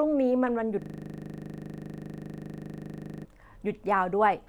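A system hang loop runs from 0.82 to 3.25 s in this speech clip. The computer or its audio driver stalled while the playback hardware kept reading the same ring buffer, so a single 40 ms slice of sound repeats exactly, some 60 times in a row. Because the buffer is so short, the repetitions fuse into a steady, mechanical buzz at 25 Hz rather than a distinct stutter, until normal playback resumes.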